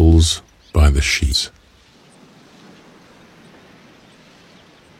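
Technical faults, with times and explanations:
1.30–1.35 s, compressed frames skipped: about 150 ms of audio is missing, with no silence left behind, as whole frames were left out of playback.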